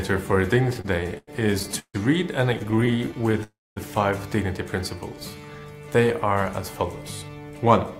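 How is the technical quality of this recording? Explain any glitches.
The recording has clear network-timing problems: two stuttering passages, a short freeze, then stretches played first slower and then faster than normal.

From 0.69 to 1.96 s there are repeated stalls (stutter). The audio hitches eleven times, with roughly 29% of that span filled by held-over sound and the longest hold lasting 150 ms. Packets were reaching the receiver late, so its jitter buffer kept running dry. Each time, the receiver extended the last sound until fresh audio arrived. Nothing is lost, but the flow drags and catches. A second stutter runs from 2.54 to 3.35 s. It has sixteen much shorter holds, none longer than 18 ms, covering about 21% of the span.

At 3.43 s a call audio freeze sets in and lasts until 3.78 s. The last sound is stretched out and fades, and about 220 ms of that stretch is near silence. 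The audio then resumes exactly where it stopped, leaving a 328 ms gap and no missing content. The likely cause is packets held up in transit, so the buffer ran empty for that long.

From 4.99 to 5.61 s a jitter buffer slow-down is audible. The audio plays at about 85% speed without any drop in pitch, so sounds are drawn out and slightly sluggish. The receiver was rebuilding its reserve by repeating single pitch periods and small pieces of pauses, which added 97 ms of material over that short stretch.

From 7.22 s to the end there is a jitter buffer speed-up. The audio runs at about 111% speed with its pitch unchanged, which gives it a hurried feel. The buffer had built up more audio than it aims to hold, probably from delayed packets arriving together. To reduce the delay, the receiver cut out tiny slices one or a few pitch periods long, removing about a tenth of a second in total.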